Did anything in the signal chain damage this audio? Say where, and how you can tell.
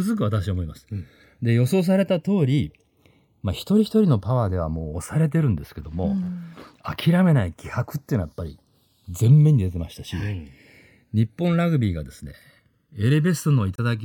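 Yes. Channels drifting apart, at the converter stage. Clocks roughly 100 ppm apart slide the inter-channel delay to about 0.7 ms. Summed to mono, the speech flanges slowly throughout.

A corrupt frame was decoded at the codec stage, from 13.76 to 13.80 s. One damaged frame was played anyway. It gives a short glitch peaking at about -15 dBFS.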